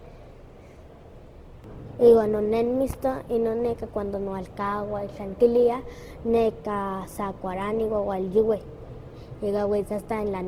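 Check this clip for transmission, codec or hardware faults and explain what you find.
One codec fault runs through the whole speech clip. Opus compression, likely at a low bitrate near 16 kbps in CELT mode: starved bands are noise-filled, so the speech sounds grainy and rough throughout, though content still reaches about 20.2 kHz.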